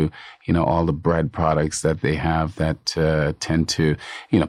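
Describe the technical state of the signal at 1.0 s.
At 1.0 s the speech signal is intact, with no audible technical fault.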